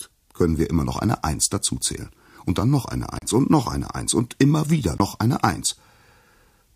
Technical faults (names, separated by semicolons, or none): Bluetooth stall